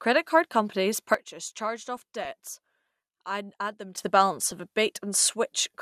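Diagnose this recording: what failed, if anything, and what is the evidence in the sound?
Right after "card companies", at 1.14 s, the speech and background noise drop together by about 12 dB in a single step, then jump back at 3.98 s. This sudden gain jump points to a digital gain stage, likely a setting applied without any ramp.

DAB burbling appears at 1.97 to 2.29 s and again briefly at 4.47 to 4.52 s, as short blips of noise over the speech. Weak reception let a small fraction of a percent of bit errors through into the MP2 codec data, putting short blips of noise into single sub-bands.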